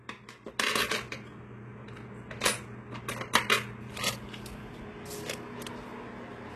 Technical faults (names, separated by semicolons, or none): HE-AAC compression